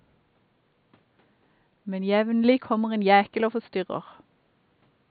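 No technical faults are audible in the speech; the only other sound is the room's own background noise, sitting about 44 dB below the voice as part of the recording.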